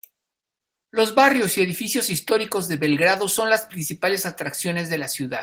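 No technical faults can be heard in this speech, which carries the signature of Opus voice compression in its hybrid mode at full bandwidth, consistent with a rate of around 20 kbps.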